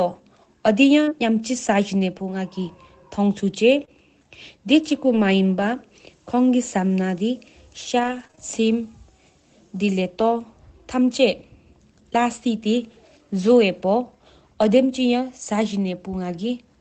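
A speech recording carried over an Opus call path, which holds the audio to about an 8 kHz band, with several network packet faults. The first is short concealed packet loss at 1.03 to 1.09 s and again at 3.85 to 3.89 s. About 40 ms and then 20 ms of audio never reached the decoder in time. The receiver covered the holes by extending the preceding sound, carrying its pitch forward through voiced parts and filling the rest with shaped noise, before fading back into the real signal. Each spot is heard as a brief smear or wobble, and a short consonant can drop out there.

The second fault is lost packets rebuilt from error correction. It occurs at 1.07 to 1.09 s, overlapping the end of the first concealment, at 3.81 to 3.83 s, and across 5.05 to 5.19 s, where four packets, about 80 ms, were recovered. In each case the following packet carried a low-bitrate spare copy, so nothing is missing. 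Those frames still come out rougher and noisier than the surrounding audio.

The third fault is scattered short gaps between 7.99 and 10.33 s. A few separate packets, around three, were lost or arrived late, the longest gap roughly 30 ms, and each was patched by continuing the last sound. Some neighbouring packets in the same span were rebuilt from error correction. The result is a handful of small ticks and hiccups across those two seconds, with the speech staying clear between them.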